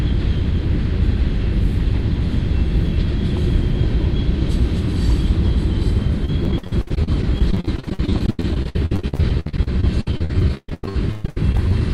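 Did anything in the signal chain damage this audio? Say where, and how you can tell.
Yes. Repeated packet loss, with its robotic sound, runs from 6.25 s to 11.72 s, and the damage happens at the network stage. Across that stretch the audio keeps dropping out in dozens of short holes, the longest about 127 ms. Each hole is papered over by stretching the last sound received, so about two seconds, roughly a third of the span, is synthetic fill. That produces the choppy texture with pieces of the sound missing.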